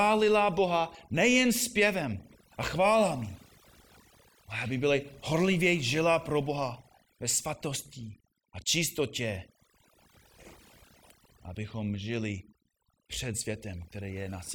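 A noise reduction stage set far too aggressively has been applied across the whole of this speech recording, a case of overdone noise removal. Whenever individual frequency bands drop close to the tool's noise estimate, it pulls them down hard or shuts them off, taking the softer parts of the voice along with the noise. The pauses collapse into near silence sprinkled with twinkling specks.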